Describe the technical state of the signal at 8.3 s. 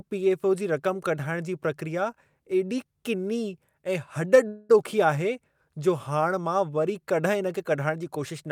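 At 8.3 s the speech signal is intact, with no technical fault present at that moment.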